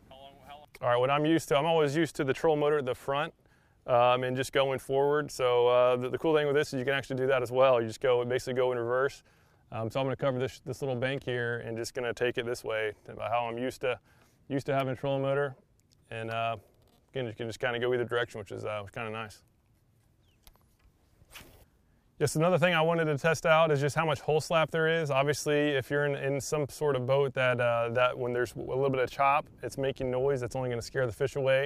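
No technical faults can be heard anywhere in this recording.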